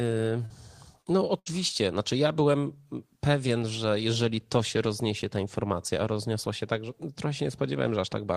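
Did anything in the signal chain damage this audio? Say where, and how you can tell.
Yes. Short concealed packet loss on the network: at 0.45, 1.02 and 1.68 s, 20–44 ms gaps were patched by extending prior sound, showing as brief smeared, repeated harmonics on a spectrogram.

A burst of packet loss on the network at 1.39–1.48 s: about 80 ms vanished. Concealment stretched the last sound and turned it down as the gap went on, visible as a decaying waveform before audio resumes.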